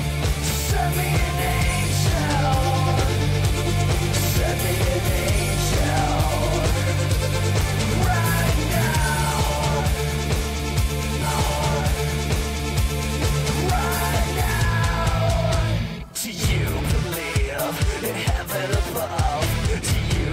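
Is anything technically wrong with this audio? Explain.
Yes, there's one. At about 11.21 s the stream segment repeats: roughly 2 seconds of audio, up to about 13.21 s, plays a second time. What's happened is the player fetched or queued the same chunk of the stream twice, so it just runs that stretch again before carrying on. You'll hear it as the sound jumping back and repeating itself, with a blip right where it loops back to the start of that segment.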